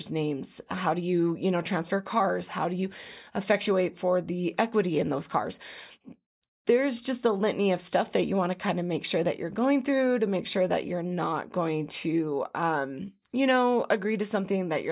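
No technical faults can be heard anywhere in the recording; the signal stays steady and intact throughout.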